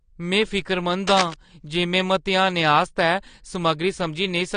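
Right from the start the speech sounds dull and smeared, with nothing above about 9.8 kHz, and the codec damage is plainly audible. That's likely AAC compression, AAC-LC at a low bitrate, something like 32 kbps. At that rate the encoder drops the top of the spectrum and spends too few bits on what's left, so detail gets blurred and the high end simply stops at that cut-off.

From 1.07 to 1.34 s there's a burst of dense, uneven scratching over the speech, sitting only a few decibels below it. That's likely cable scratch noise: a worn cable, connector or control carrying a DC voltage got moved, its contact resistance jumped around quickly, and those rapid changes came through as rustling noise for that quarter of a second or so.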